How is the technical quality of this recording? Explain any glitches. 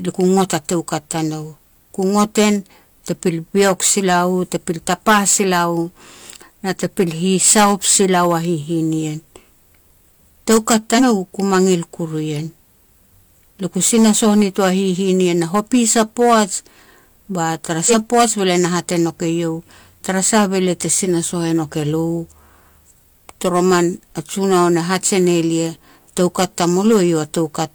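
Not great: two kinds of fault are present in this speech recording.

Hard clipping runs through the whole clip. The signal was driven roughly 13 dB past what some stage in the chain could handle, so the loudest peaks, a small fraction of the samples (around a couple of percent), get sliced flat. Those squared-off tops add harmonics high up the spectrum, and you hear that as harsh distortion on the louder syllables.

There are also compressed frames skipped, at 10.94–11.04 s and again at 17.86–17.94 s. At each spot, whole frames of the encoded stream never got played, either because they were missing or because the decoder rejected them as corrupt. The speech jumps ahead, losing roughly a tenth of a second the first time and around 150 ms the second, amounts that fit whole-frame multiples.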